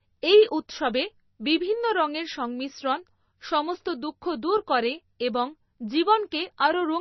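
From start to end, the speech is dull, with nothing above 5.9 kHz. Weak detail flickers in and out. The sound turns watery and swirly, and s sounds chirp. This is likely heavy MP3 compression, which fits a bitrate near 24 kbps.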